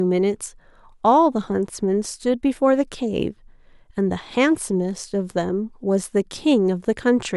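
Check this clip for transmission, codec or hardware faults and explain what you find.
Listening through the speech recording turns up no transmission, codec or hardware fault anywhere in the signal.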